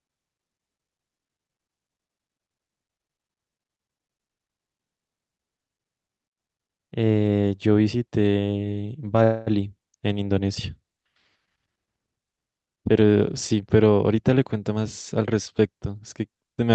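At 9.23 s the speech stops moving forward for about 0.25 s and the last sound is held as a fading buzz until 9.49 s, when it picks up exactly where it left off. This call audio freeze was likely caused by delayed packets emptying the jitter buffer. The receiver filled 232 ms with extended sound, so nothing is lost, but everything after it runs 232 ms late. A spectrogram shows a smeared, decaying band in place of normal speech structure, and the waveform shows a dwindling tail rather than a gap.

From 13.20 s to 15.35 s the jitter buffer speed-up is audible as a hurried stretch. The talker's pitch stays put, but the delivery runs at about 110% speed. The buffer held more audio than its target and shed the excess, about a fifth of a second in total, by cutting out many short pitch-period slices in quick succession. On the waveform, syllables sit closer together and pauses shrink. The spectrogram keeps its harmonic spacing, and it remains capped near 8 kHz by the call codec throughout.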